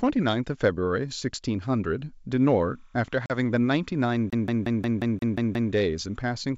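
From 2.39 s to 6.38 s, timecode bleed sits behind the speech. Linear timecode from an adjacent track or cable has leaked into the audio path. Its square-wave signal alternates between tones near 1 and 2 kHz, and the modulation rate fits 30 frame-per-second code. At roughly 45 dB below the speech, it is faint but continuous: a thin, chirping warble, and it stops just before the clip ends.

At 3.26 s, packet loss on an ADPCM call cuts a hard-edged hole of about 40 ms into the speech, consistent with a couple of lost packets. The gap is filled with silence. Because the receiver's adaptive predictor and step size no longer match the sender's, the speech comes back slightly distorted, then settles by about 3.36 s as the decoder state re-converges.

From 4.30 s to 5.72 s, the CD is stuck on one turn. A scratch sends the laser back one track at the same point on every revolution, so a 0.18 s stretch of speech repeats eight times with a short mute at each jump. 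The result is the rapid, evenly spaced stutter of a skipping disc, and forward playback resumes at 5.72 s. Underneath all three faults, the wideband G.722 telephone coding keeps its faint upper-band hiss.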